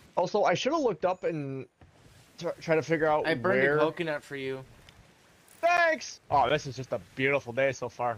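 Nothing technically wrong can be heard anywhere in this audio.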